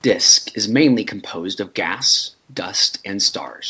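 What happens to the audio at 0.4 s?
Nothing goes wrong at 0.4 s: the speech carries on intact through that moment, with only the normal band limit of the call path, which leaves nothing above 8 kHz.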